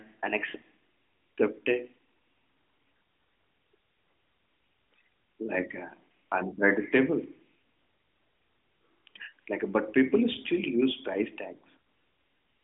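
Nothing goes wrong anywhere along the way here, so there's simply no fault to point to.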